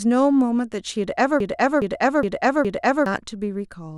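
From 1.40 s to 3.06 s the speech catches and stutters: a fragment of about 0.41 s plays four times back to back, and the speech that belonged there is lost. This broken-record loop likely comes from a stalled player or stream repeating its last buffered fragment.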